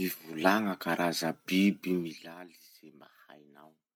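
At 2.0 s, right after "karaza biby", the speech gets pulled down by something like 20 dB over about a third of a second, ending at 2.36 s, and you can hear zipper noise riding on it. The gain isn't ramped smoothly. It drops in 1 dB jumps, around fifty a second, and each jump leaves a tiny click, so the fade comes out with a quick ticking, zipping texture until the level settles.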